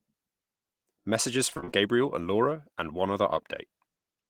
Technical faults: repeated packet loss (robotic sound)

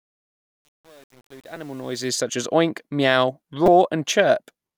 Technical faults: truncation distortion on a fade; repeated buffer

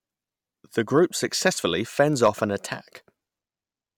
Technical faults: hard clipping

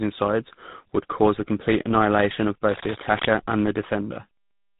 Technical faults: tandem speech coding

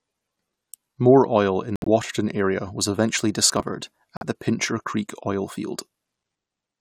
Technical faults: corrupt frame muted; processor overload crackle

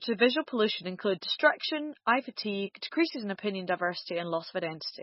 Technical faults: MP3 compression

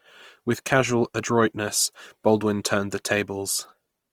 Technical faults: Opus compression

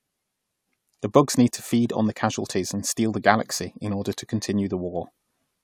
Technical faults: none

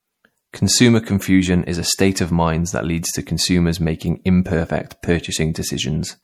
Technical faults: MP3 compression

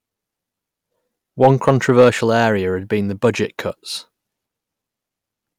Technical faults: hard clipping

